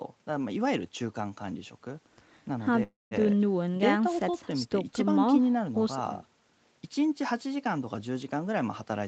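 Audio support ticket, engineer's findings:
Call audio freeze, 2.83–3.14 s: last sound stretched into a fading buzz, then 0.17 s silence. Likely jitter buffer ran dry on delayed packets. Resumes intact, 0.28 s late.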